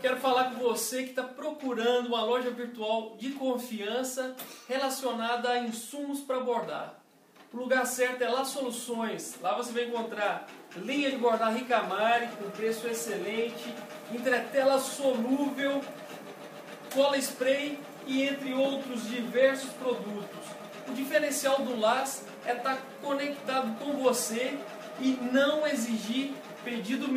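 No technical faults can be heard at any point in the audio.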